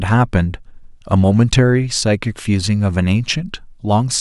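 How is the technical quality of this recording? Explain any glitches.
The technical quality of this recording is sound, with no glitches to explain.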